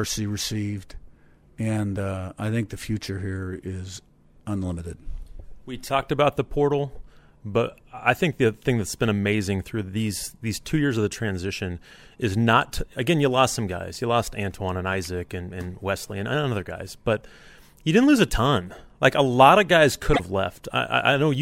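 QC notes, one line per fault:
20.10–20.20 s, damaged data in a compressed stream: right after "a lot of guys" there's a short garbled blip, about a tenth of a second. Bad bytes in the coded stream there made the decoder misread those frames and lose sync until it found a clean frame header again.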